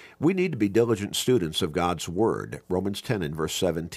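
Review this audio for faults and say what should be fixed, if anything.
Nothing needs fixing, because the speech signal shows no technical faults anywhere in the recording.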